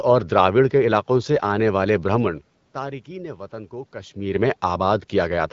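No technical faults are audible in this speech clip; the room noise and the level shifts near 2 s and 4 s, where the talker moves relative to the microphone, belong to the recording itself.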